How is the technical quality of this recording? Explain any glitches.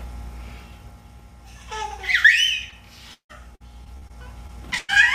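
The recording has clear network-transmission damage clustered in its second half, with four separate dropout events between about 2.7 and 4.9 seconds.

Short concealed packet loss occurs twice, at 2.69 to 2.73 s and again at 4.47 to 4.50 s. Each is heard as a brief smear or wobble. About 20 ms of audio failed to arrive at the decoder in time. The receiver patched the hole by extending the preceding sound for about 10 to 20 ms and then blended back into the real signal.

Repeated packet loss gives a robotic sound from 3.13 to 4.11 s. That passage turns choppy, with pieces audibly absent. Five separate gaps hit this second-long stretch, removing about 300 ms of audio in total, the longest about 159 ms. The receiver synthesised replacement audio for each hole, covering nearly a third of the span, and the next gap arrived before the sound could settle.

A burst of packet loss follows at 4.78 to 4.90 s. 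There the sound stretches into a held buzz or a fading hiss before resuming further along. A continuous 100 ms block never arrived. The concealment continued the last sound and turned it down as the gap went on, so the material that belonged in that window is missing.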